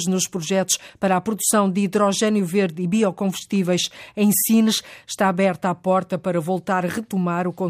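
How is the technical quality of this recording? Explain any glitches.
Nothing goes wrong technically anywhere in this recording.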